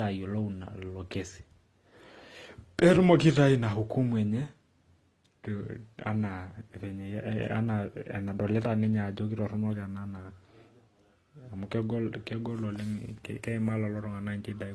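Throughout the speech, nothing remains above 12 kHz, and two different coding artefacts overlap. A single codec leaves one consistent texture, so this layering points to likely transcoding between lossy codecs, fitting low-rate AAC followed by Opus.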